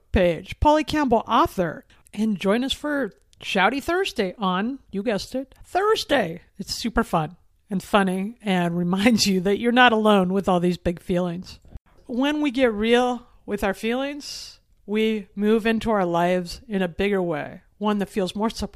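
No technical faults are audible.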